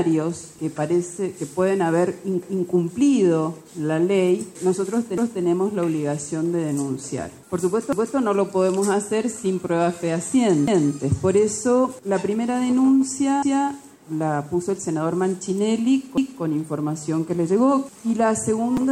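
A stutter at 2.43, 5.18, 7.93, 10.68, 13.43 and 16.18 s replays 250 ms of sound: overlapping chunks, each 2.5 s block restarting before the previous one ended.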